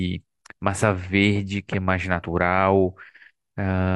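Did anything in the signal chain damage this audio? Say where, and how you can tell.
Yes. At the codec stage, compressed frames were skipped in this speech: at about 2.20 to 2.24 s a single frame of roughly 40 ms is missing, so the audio lurches forward by one frame length, which fits a frame of about 42.7 ms. The decoder either never received that frame or rejected it as damaged. Unlike a dropout or a buffer glitch, there is no silence gap; the speech simply jumps ahead across the missing frame.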